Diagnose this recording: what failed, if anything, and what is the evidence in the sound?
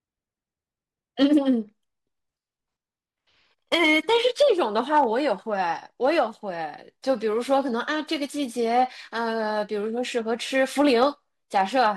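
Hard clipping at 1.22–1.38 s, 3.73–5.04 s, 6.05–6.19 s and 10.80–11.06 s, where the speech peaks crackle. The level ran about 2 to 3 dB past what the converter or sample format could pass, so the waveform tops were cut flat.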